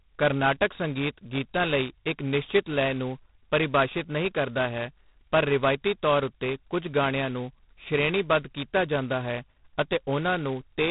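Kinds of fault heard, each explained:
G.726 ADPCM: a telephone codec that sends each sample as a coarse difference from an adaptive prediction, here at 16 kbit/s, the lowest rate, so only 2 bits a sample. That leaves heavy damage: a harsh, rasping hiss that rises and falls with the speech level, and nothing above 3.9 kHz.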